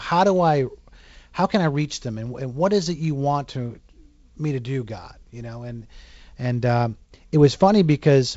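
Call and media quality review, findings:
No faults found in the speech. The G.722 wideband coding path is audible at 48 kbit/s, with nothing above about 7.7 kHz and light coding noise, since the lower band has fewer bits at this rate.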